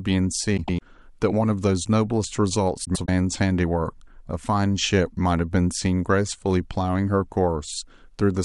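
Frames out of order affect this speech clip twice, from 0.57 to 0.82 s and from 2.84 to 3.09 s. In each stretch, two neighbouring blocks of about 105 ms, which fits runs of four frames each, were decoded in swapped order, so the later audio plays before the earlier. The result is a brief garbled flutter, and no time is lost.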